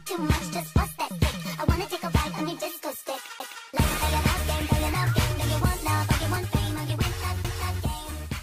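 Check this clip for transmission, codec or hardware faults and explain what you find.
Two CD skips are audible, at 3.39 s and 7.44 s. At each, a short mute of about 10 ms and 7 ms respectively gives a tick. The sound then resumes from a different spot. The laser has jumped to another turn of the disc's spiral.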